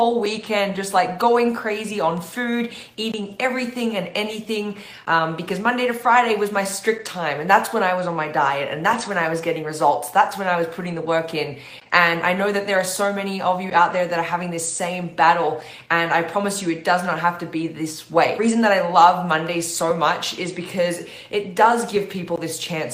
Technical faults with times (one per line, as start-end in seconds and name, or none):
0.00-22.93 clock drift between sender and receiver
0.04-22.74 repeated timing corrections